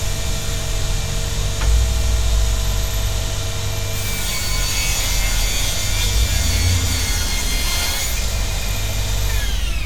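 Nothing in this recording of everyday sounds stood out on listening.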